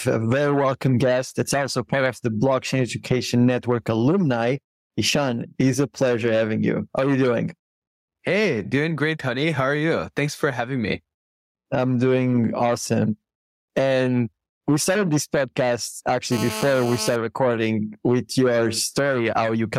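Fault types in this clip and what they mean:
Gain pumping: loud and soft parts are squashed closer in level, swinging around 15 dB, likely a fast limiter fighting excessive gain.
GSM phone buzz: a nearby phone's bursts give a raspy 217 Hz buzz, rich in harmonics, steady from 16.32 to 17.16 s, about 15 dB below the signal.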